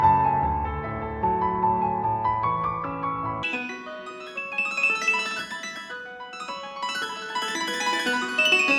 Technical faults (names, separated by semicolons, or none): wrong sample rate